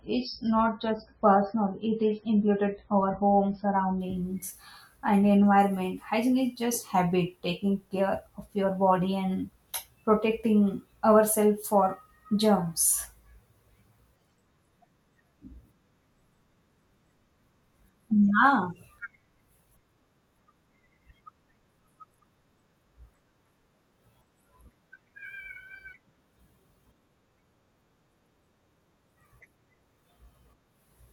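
From the start to 4.0 s the speech shows an adaptive stream starting at a low bitrate. The player opens on a thin, heavily compressed version, which fits an MP3 stream of around 16 kbit/s, with nothing above 5.6 kHz and a smeared, watery texture. At 4.0 s it switches to a higher-quality stream, which fits 128 kbit/s. There is no gap. On a spectrogram, a flat ceiling at 5.6 kHz gives way abruptly to energy reaching much higher.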